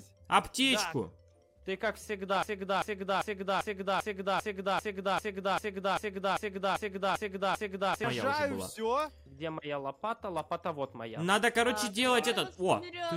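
A broken-record loop runs from 2.43 to 8.04 s: a 394 ms fragment repeats exactly, back to back, 14 times. The player or stream likely stalled and kept resending its last held piece, so the audio that belonged there is lost.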